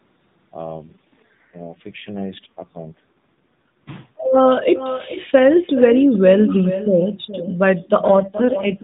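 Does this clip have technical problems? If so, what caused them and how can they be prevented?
Yes. Echo with no canceller runs through the whole recording. Everything spoken returns around 0.4 s later as a quieter copy, about 11 dB down, sounding thinner. That delay is the trip out to the far end, where a loudspeaker plays the call into a microphone, and back again. Nothing on that side subtracts the returning signal, so the copy rides along behind each phrase. Turning on acoustic echo cancellation at the far end, or having that listener use a headset, would prevent it.

An AMR rate drop occurs from 0.76 s to 4.40 s, and again from 8.08 s to the end of the clip. In both stretches the speech turns rougher, buzzier and more synthetic. There is no gap and no loss of bandwidth, which still stops at 4 kHz as it does in the lighter-coded AMR narrowband passages. The change fits a weak radio link pushing the codec down from 12.2 to 4.75 kbps so that more bits can go to error protection. 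Better signal coverage, or a wideband or Wi-Fi calling path, would avoid it.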